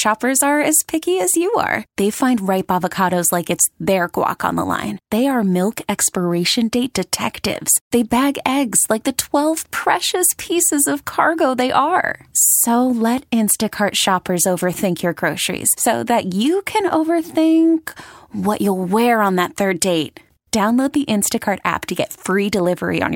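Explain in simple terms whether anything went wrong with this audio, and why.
Nothing went wrong: listening through the whole speech recording, there are no dropouts, clicks, distortion or glitches, so nothing here needs explaining.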